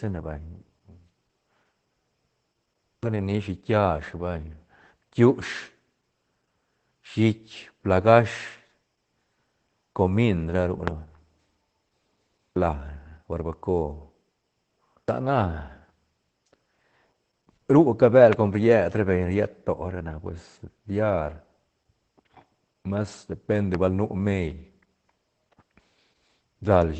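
All the way through, the speech has Opus voice compression running at about 12 kbps in SILK mode, which points to a wideband voice setting. Nothing comes through above roughly 8.7 kHz, so it sounds muffled, with a hoarse, slightly robotic texture from the coarse coding.

On top of that, there are three loud pops, at 10.88 to 10.90 s, 18.33 to 18.35 s and 23.75 to 23.77 s. Each is a single sharp click about 20 ms long, roughly 15 dB, 15 dB and 10 dB above the speech, likely from a voltage spike such as a switch, static or a driver glitch.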